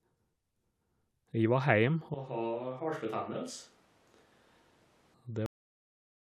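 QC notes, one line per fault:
2.14–5.14 s, switch to a distant microphone: the speech abruptly turns roomy and hollow with thinner bass, drops by about 10 dB, and room noise rises to roughly 30 dB below the speech, likely because the close microphone's feed was lost and a farther pickup took over.
5.46 s, cut-off end: the audio stops mid-sound and falls straight to digital silence with no natural decay, because the final stretch of buffers was never written or played out, so the recording simply ends instead of finishing its last sound.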